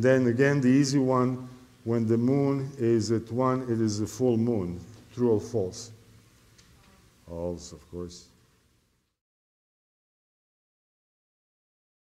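No technical faults are audible.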